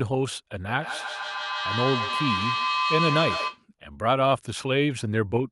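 From 0.55 to 3.66 s there is feedback echo between two devices. A second device on the same call replays this microphone's signal, and the microphone captures it again. Each word returns roughly every 150 ms, thinner and ringing, peaking about 3 dB below the speech.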